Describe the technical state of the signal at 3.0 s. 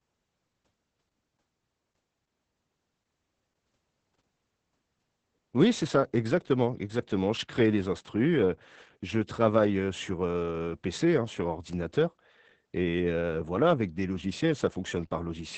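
At 3.0 s the speech carries Opus voice compression, present across the whole clip. The SILK coder has cut everything above 8.5 kHz and coded the excitation coarsely, consistent with roughly 10 kbps, so the voice sounds muffled, hoarse and slightly robotic.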